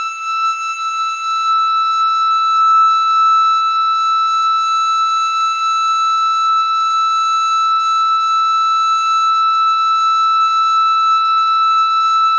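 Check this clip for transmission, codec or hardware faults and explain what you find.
Nothing wrong can be heard in the music, which has passed through a WebRTC call path whose content stops at 8 kHz, a band limit that fits the G.722 wideband codec running at 64 kbps.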